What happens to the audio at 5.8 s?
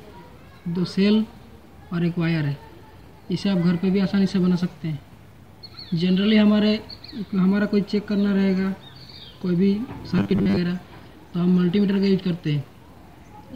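Nothing goes wrong at 5.8 s; the audio plays through that moment intact, with no dropout, click or distortion.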